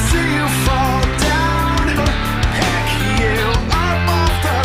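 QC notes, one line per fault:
1.97–1.99 s, skip ahead: playback jumps forward with no gap or fill, and the material on either side is spliced almost directly. Roughly 0.7 s of audio is absent, so the sound lurches abruptly at the join. The buffered backlog was discarded rather than played, likely because the jitter buffer overflowed with later audio already queued. Playback latency drops by around the same 0.7 s immediately after the jump.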